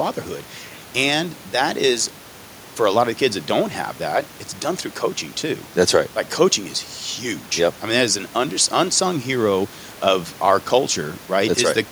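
Nothing stood out on listening to this speech clip, and the faint room noise sits about 24 dB below the speech.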